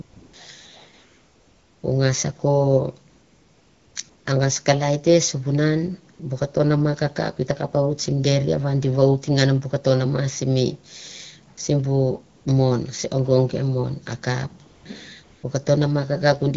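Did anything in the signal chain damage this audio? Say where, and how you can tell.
Yes. At the codec's discontinuous-transmission stage, AMR comfort noise replaces the real background in nine pauses between 0.01 and 15.43 s, lasting 40 to 900 ms. Speech frames stop, and the receiver substitutes smooth synthetic noise that switches audibly against the lightly coded wideband speech.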